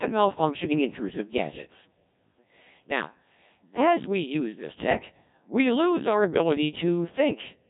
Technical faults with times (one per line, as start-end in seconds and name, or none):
0.00-7.69 Codec 2 vocoder